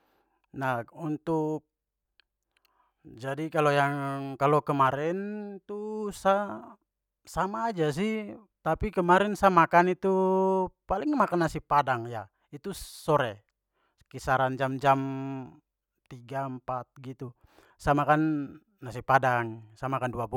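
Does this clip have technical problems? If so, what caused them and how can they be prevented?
No, there's nothing technically wrong to hear in this speech recording, so there's no problem to trace or prevent.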